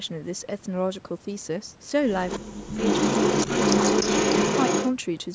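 At 2.28 s there's a short echo leak lasting until 2.4 s: a copy of the speech about 290 ms late, a bit quieter than the original. That's most likely the far end's loudspeaker feeding its mic, with the echo canceller letting some through.

From 2.39 to 2.78 s the speech itself dips hard, by roughly 40 dB at its deepest. It looks like speech suppressed in double talk: the canceller likely couldn't tell talker from echo and turned everything down.

Then from 2.78 to 4.91 s the echo leak comes back for a longer stretch at about 292 ms delay, this time a bit louder than the speech, so the delayed copy really sits on top.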